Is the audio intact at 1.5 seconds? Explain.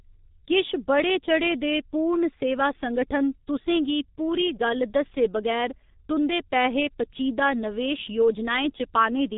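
No, at 1.5 seconds you're hearing the G.723.1 codec damage that runs through the whole clip. Nothing gets above about 3.8 kHz, and the slow, low-rate voice model, which fits roughly 6 kbit/s coding, leaves the speech muffled and hoarse with smeared consonants.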